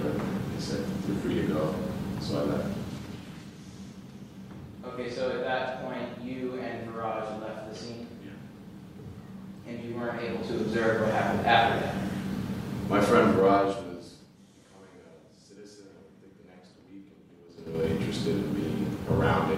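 Level changes were applied in unsmoothed 2 dB steps, a drop of about 25 dB from 13.31 to 14.51 s, and 6 dB steps, a rise of about 25 dB from 17.49 to 17.84 s, each at roughly ten steps a second. The result is audible zipper noise, a ticking that rides on the sound while the level moves.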